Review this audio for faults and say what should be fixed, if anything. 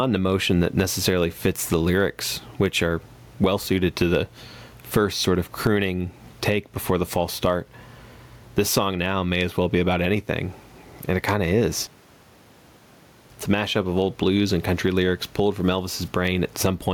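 There's gain pumping right through the clip: the room noise sits about 42 dB under the speech, and the gain swings something like 15 dB. That's likely the input gain cranked far too high with a fast limiter hauling it back down, which also squashes the dynamics. Next time, set the mic gain so peaks land well below full scale and ease off or slow down the limiter.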